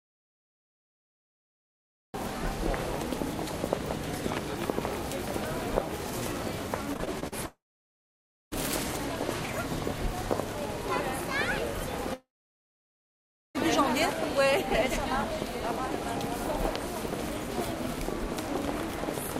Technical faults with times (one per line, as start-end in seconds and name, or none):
0.00-2.14 audio dropout to silence
6.93-7.34 repeated packet loss (robotic sound)
7.46-8.53 long network dropout
12.13-13.56 long network dropout